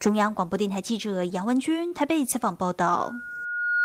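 At 1.87 to 1.94 s, short concealed packet loss drops about 40 ms of speech. The receiver fills 34 ms by extending the last sound, leaving a brief smear.

From 2.91 s to the end, a loudspeaker feedback squeal builds at 1.4 kHz. The mic-speaker loop gain exceeds one. It swells over roughly a second, ending a few decibels above the speech.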